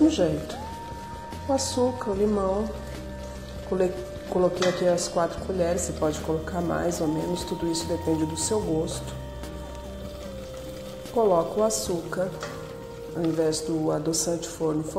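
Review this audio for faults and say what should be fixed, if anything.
From 0.0 to 6.0 s the audio shows an adaptive stream starting at a low bitrate. The opening segment has nothing above 14.9 kHz, the upper treble has a synthetic, reconstructed quality, and codec artefacts are stronger. At 6.0 s the quality jumps abruptly to a cleaner rendition with no gap. The opening sound points to a parametric low-bitrate profile in the region of 24 kbit/s, and the later sound fits a conventional AAC encode around 96 kbit/s. To prevent it, start playback on a higher rendition or allow a brief bandwidth probe before the first segment is chosen.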